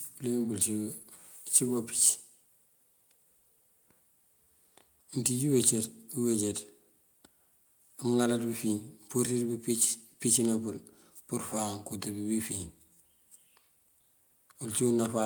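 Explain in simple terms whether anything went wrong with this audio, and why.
Nothing went wrong here: the speech recording shows no audible technical fault anywhere.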